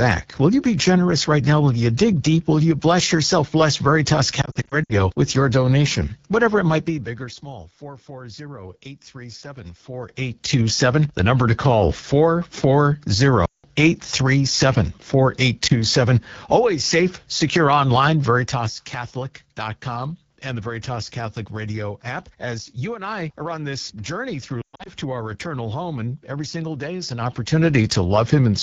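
Throughout, the speech has a rough, raspy, buzzy texture, with a thin noise-like haze above the main band. This is the AMR wideband (HD Voice) codec at one of its lowest rates, which fits the 8.85 kbit/s mode. At that rate the pulse-driven vocal tract model is too coarse to carry the voice cleanly, so the damage is plainly audible. Everything above 6.4 kHz is only shaped noise, not real detail.

From 4.41 to 4.94 s the voice stutters and warbles. About 200 ms of audio drops out in short gaps spread over 480 ms, and the longest single gap is 60 ms. These are lost AMR speech frames. Each time, the decoder repeats the last good pitch and vocal tract settings at falling gain, so the sound briefly smears and comes back rough.

Between 6.69 and 7.43 s the level falls by roughly 20 dB with an audible ticking, like a zip being pulled. This is zipper noise. The gain drops in 3 dB steps about ten times a second with no smoothing, and every jump leaves a small click.

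At 13.46 to 13.65 s a 180 ms run of lost AMR speech frames drops the voice to near silence within two frames before it returns weak. At 15.67 s a single lost frame makes a brief dip. From 24.61 to 24.91 s there is another 180 ms of loss, scattered over 240 ms. Its longest run of 120 ms is heard as a quick drop to near silence. From 27.03 to 27.40 s zipper noise returns as the level rises by roughly 10 dB in the same 3 dB clicking steps.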